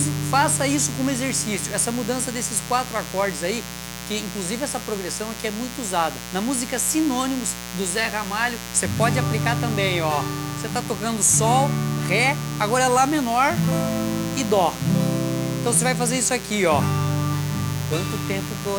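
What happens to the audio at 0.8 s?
Mains buzz is present at 0.8 s, as it is through the whole clip. Sharp switching spikes from a dimmer, rectifier or unshielded cable are getting into the signal twice per cycle of the 60 Hz supply, so a dense stack of 60 Hz harmonics climbs into the kilohertz range. The result is a steady, raspy buzz sitting only around 10 dB below the wanted sound.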